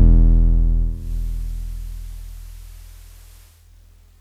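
At 0.82 s the digital radio blends to analogue FM over 0.32 s. The music drops about 2 dB and gains faint hiss. It returns at 3.73 s.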